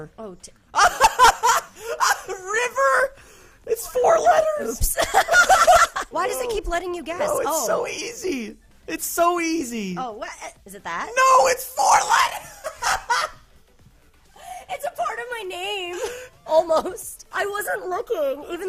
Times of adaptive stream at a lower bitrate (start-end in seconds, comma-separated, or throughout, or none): none